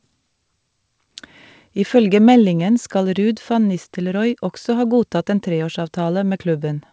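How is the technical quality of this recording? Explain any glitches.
No glitches turn up anywhere in this recording; it has the sound of a wideband call, with nothing above 8 kHz, which fits a G.722 call codec and the usual coding character that goes with it.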